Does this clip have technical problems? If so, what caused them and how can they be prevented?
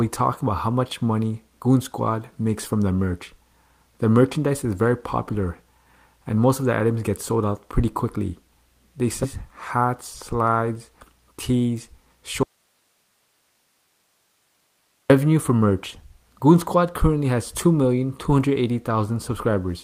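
Yes. At 9.23 to 9.25 s there is a skip ahead: roughly 0.7 s of audio vanishes and the two sides are butted together with no gap, likely from an overflowing jitter buffer discarding queued audio to catch up. Unlike a dropout, nothing fills the break. Sizing the jitter buffer generously and letting it adapt gradually rather than flushing would prevent it.

From 12.43 to 15.10 s, a 2.67 s audio dropout to a faint residue leaves only hiss about 45 dB below the signal. The cut is abrupt at both ends, unlike a pause or fade, and the live hiss suggests the path after the break kept running while the source feed was likely lost. Securing connections and monitoring input continuity would prevent it.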